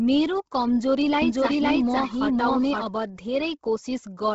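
From start to finish the speech has a breathy, grainy upper edge and nothing above 7.8 kHz, likely Bluetooth LC3 compression working hard at a rate that fits around 16 kbps. From 1.22 to 2.82 s a doubled audio track appears: a dry, full-band second copy trails about half a second behind at roughly equal level, cutting in and out abruptly, likely from a slower second capture path.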